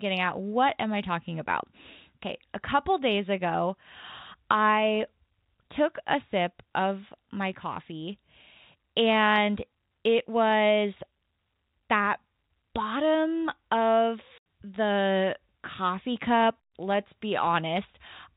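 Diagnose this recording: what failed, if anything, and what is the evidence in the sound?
The network's the culprit here: packet loss filled with silence. At 14.38 s there's a dead gap of 80 ms, just before "the coffee cup let's", with hard edges where the audio drops out and snaps back. That length fits four 20 ms packets going missing, with the receiver playing silence instead, on top of the band-limited G.711 telephone coding.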